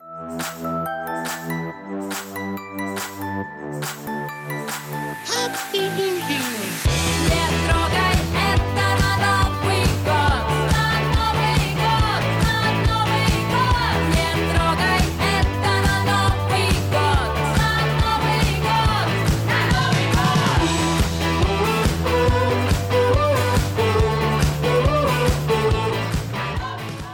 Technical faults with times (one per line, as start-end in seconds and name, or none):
none